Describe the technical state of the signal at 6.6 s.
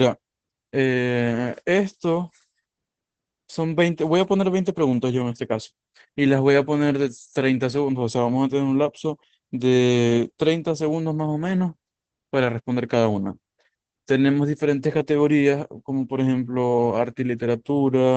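At 6.6 s you're hearing Opus voice compression, and it runs through the whole clip rather than just this moment. The speech sounds like it went through the SILK linear-prediction coder at a low rate, roughly what you'd expect around 12 kbps. It's held to wideband, with nothing above 8.5 kHz, and the excitation is coded coarsely. So the voice comes out muffled, a bit hoarse and slightly robotic, and the damage is plainly audible.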